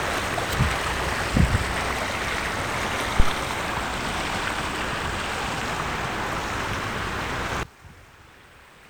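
At 3.20 s a phantom power thump cuts in, a deep low-frequency knock lasting until about 3.36 s. Switching a supply on a live input drives a voltage step through the coupling capacitors, and the input rings it out as a single bump whose decay here is quick, about 36 ms. Unlike handling noise or a knock on the microphone, it carries no rustle or scrape, just one clean low pulse.

From 7.63 s to the end, the level collapses by about 23 dB, and what survives is a faint copy. The likely cause is one channel inverted: with one side's polarity reversed, everything shared between the channels cancels when they sum to mono, leaving only their difference. A dropout or fade would lower everything evenly. This cancellation leaves a faint residue instead of silence.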